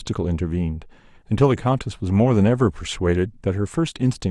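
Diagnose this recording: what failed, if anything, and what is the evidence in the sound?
Nothing in this speech recording points to a failure at any stage of the signal chain. No moment in the sound carries evidence of a fault, so there is nothing here to diagnose.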